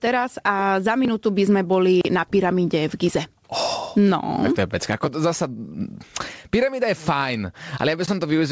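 Speech throughout, with gain pumping: the gain swings by around 20 dB, likely from excessive microphone gain driving a fast limiter. The waveform shows a squashed, flat envelope. The spectrum stops near 8 kHz, as expected from a wideband call codec.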